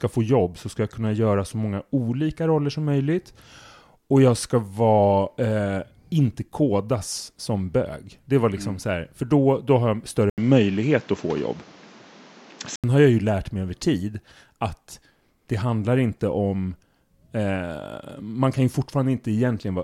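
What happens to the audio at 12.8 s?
At 12.84 s the sound recovers from a stretch, begun at 10.30 s, that was likely an input switched to a poorer device. Throughout that span a spectrogram shows a narrower band, a new noise floor roughly 30 dB down, a level shift of around 5 dB, and an 80 ms gap at the switch.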